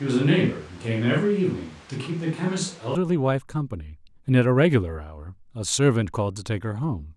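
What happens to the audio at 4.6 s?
Nothing goes wrong at 4.6 s; the speech there plays through intact, with no dropout, click or distortion.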